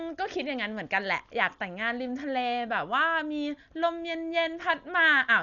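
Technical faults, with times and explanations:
Throughout: Dolby Digital compression damage, and it's heavy. The speech sounds dull because nothing comes through above about 6.9 kHz, and around the voiced sounds there's a rough, fluttery noise. That's likely an AC-3 style encoder running very short of bits, something in the region of 48 kbps. At that rate it narrows the band and leaves many frequency lines with no real detail, and the decoder fills those gaps with noise.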